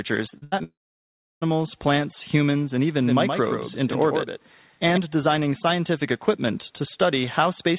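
Speech over a call link, band-limited to nothing above 4 kHz, which fits a telephone-grade codec like G.711. From 0.3 to 0.62 s there's repeated packet loss with that robotic sound: four short holes, the longest about 81 ms, each patched by stretching the last bit of audio, so roughly half that stretch is filler and it comes out choppy. Right after, from 0.64 to 1.43 s, a long network dropout is the likely cause of the buzz or hiss that trails off into about 0.69 s of silence, with the audio picking up again at "plants humans and" and the lost part simply gone. Then from 3.03 to 4.97 s, between "plants humans and" and "designing scientific equipment", there's a doubled audio track: a second full-band copy roughly a tenth of a second behind and about 5 dB quieter, with no room colour, switching in and out abruptly. That gives a hard, slapback-style echo.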